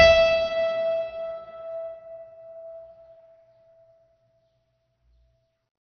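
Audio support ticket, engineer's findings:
Music, whole clip: dull top with nothing above 6.3 kHz, gurgling granular texture, upper bands flickering on and off. Likely MP2 compression, heavy damage, fitting a 48 kbps stream. Unlike a plain low-pass, the surviving bands are coarsely quantised and switch unevenly.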